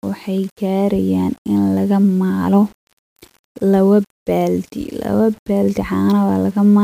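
From start to finish the speech carries a grainy, gritty distortion that rises and falls with the signal itself, roughest on quiet syllables and tails, where low-level detail breaks into a buzzy sputter. This is low bit depth without dither: the audio was likely rounded to around 7 bits with no dither added, so the quantisation error tracks the waveform rather than forming a steady hiss, sitting only some 35 dB below the speech.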